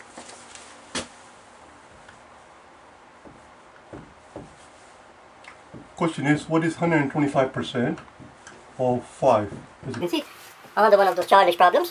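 From 10.01 s to the end at 11.91 s, a wrong sample rate makes the sound run 1.45 times fast and about 6.45 semitones high, consistent with 22 kHz material played at 32 kHz. Unlike a pitch shift or time-stretch, speed and pitch rise together.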